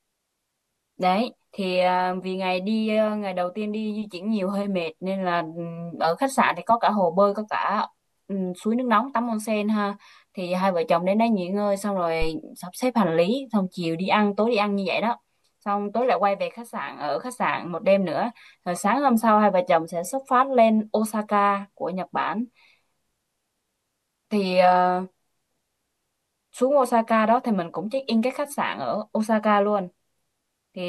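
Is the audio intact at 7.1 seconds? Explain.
Yes, the audio is intact at 7.1 seconds, with no audible fault at that point.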